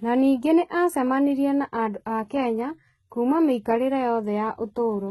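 From the first moment to the end, the speech carries what is likely HE-AAC compression, and fairly heavy at that. The top is synthetic: everything is gone above about 11.8 kHz, and the treble below that sounds copied up from lower bands rather than captured, so the s sounds come out gritty and metallic, with harmonics not lining up across the crossover. The damage fits a very low bitrate, around 16 kbps.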